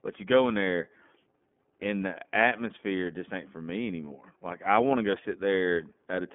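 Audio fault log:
Throughout, iLBC codec: the speech sounds narrowband and a bit rough and synthetic, with nothing above about 3.8 kHz. That fits 30 ms frames coded independently at roughly 13 kbps.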